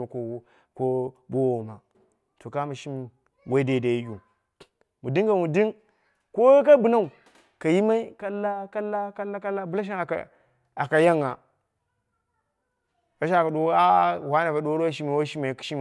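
No dropouts, clicks, distortion or timing faults turn up anywhere in this speech recording.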